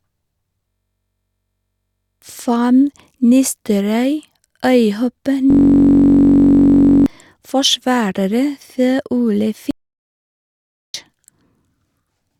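From 0.68 to 2.22 s, and again from 5.50 to 7.06 s, a system hang loop replaces the speech. A 21.33 ms fragment repeats at 46.9 Hz, giving a steady buzz. That fits a frozen 1024-sample buffer. About a second and a half of speech is lost each time. From 9.71 to 10.94 s, an audio dropout to silence cuts in, likely from lost input. The gap is dead digital silence with no room tone, and 1.23 s of speech is gone.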